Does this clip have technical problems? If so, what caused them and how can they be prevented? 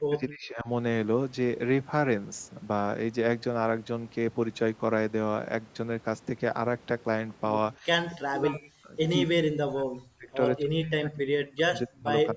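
Yes. The speech keeps dipping or cutting out, which is most likely speech suppressed in double talk. It happens from 0 to 0.67 s, briefly at 7.80 to 7.86 s, then at 8.1 to 8.98 s, 9.24 to 10.29 s, 10.58 to 11.37 s, 11.56 to 12.1 s, and 12.31 s to the end. The worst drops are around 40 dB and the mildest around 15 dB. With both ends talking, the echo canceller can't tell this talker from the loudspeaker echo, so it ducks everything. The audio also has nothing above 8 kHz, which fits ordinary call mic processing. To prevent it, use a headset so no far-end echo reaches the mic, or use a canceller with better double-talk handling.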